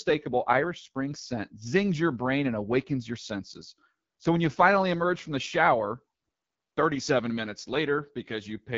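AMR wideband (HD Voice) codec damage runs from start to finish of the speech. The codec models the vocal tract and drives it with coded pulses up to 6.4 kHz, then fills the band from 6.4 to 7 kHz with shaped noise instead of real detail, and nothing reaches above 7.5 kHz. The roughness is plainly audible, with a raspy, grainy edge on the speech that suggests one of the codec's lowest modes, around 8.85 kbit/s.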